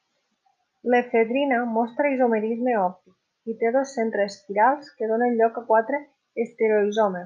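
No technical faults can be heard anywhere in the recording. The speech continues without any audible interruption or disturbance that a listener could single out.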